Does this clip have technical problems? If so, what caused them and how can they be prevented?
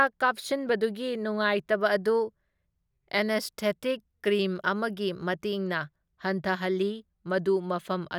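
No, nothing technical goes wrong in this speech recording, so there's no fault to trace and nothing that needs preventing.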